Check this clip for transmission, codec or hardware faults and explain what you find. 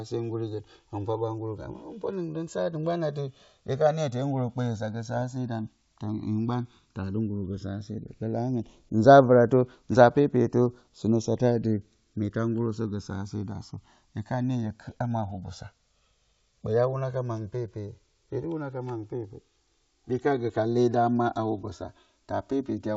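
Two faults stand out in this speech clip: a slow timing drift between the channels that runs the whole length, and a short burst of transmission errors.

Channels drifting apart, throughout: the two channels were captured on separately clocked devices whose rates differ by a few hundred parts per million, so the offset between them grows steadily until it reaches roughly 3 ms by the end. Summed to mono, that changing delay builds comb-filter notches that glide slowly downward through the spectrum, giving the speech a gradual, hollow flanging sweep.

Bit errors on an ADPCM link, from 5.16 to 5.23 s: a small fraction of a percent of bits were corrupted across a handful of frames. On the wideband link, which sounds consistent with G.722 at 64 kbit/s, each flipped bit also knocks the decoder's step size and predictor off track, so the damage persists for several milliseconds rather than staying a single sample. 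The result is a cluster of pops and a rough, gritty burst with brief jumps in level.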